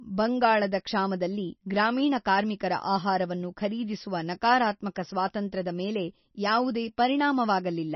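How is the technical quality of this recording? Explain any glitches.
Poor: heavy compression damage runs through the whole speech clip. Throughout, everything above 5.9 kHz is gone, a flat ceiling on a spectrogram with flickering holes below. The s sounds turn watery and swirly. The likely cause is MP3 compression at roughly 26 kbps, which drops weak frequency lines from frame to frame.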